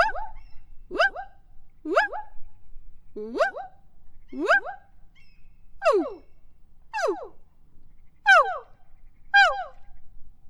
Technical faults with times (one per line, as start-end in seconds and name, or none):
0.94 damaged data in a compressed stream